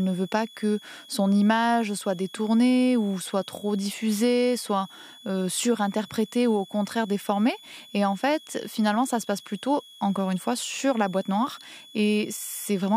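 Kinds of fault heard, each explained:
Switching supply whistle: a high whistle near 3.3 to 3.4 kHz, about 25 dB below the speech, runs throughout the clip, drifting slightly as a switching power supply's frequency shifts.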